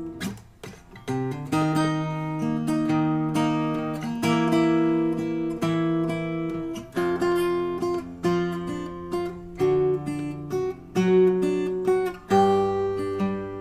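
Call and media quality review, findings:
No faults found: the signal's technical state shows no dropouts, level discontinuities, distortion or timing irregularities anywhere in the recording.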